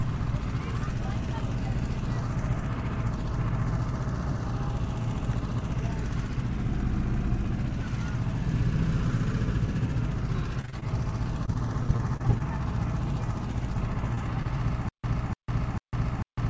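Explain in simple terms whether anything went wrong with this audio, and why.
Twice the sound turns choppy and robotic, from 10.61 to 10.84 s and again from 11.46 to 12.42 s. This is repeated packet loss: small pieces of audio kept going missing, and each hole was patched by stretching the last sound.

At 14.15 to 14.19 s there is a brief smear. That is a short concealed packet loss, where about 20 ms never arrived and was filled in.

At 14.43 to 14.47 s one sound is held a touch too long. This short stall from a late packet happened because the receiver paused while waiting, and nothing was lost.

From 14.89 s to the end, the same burst of about 0.3 s keeps replaying, with about 0.15 s of silence between repeats. This is a stutter with silent gaps, likely from the stream stalling and replaying its last fragment.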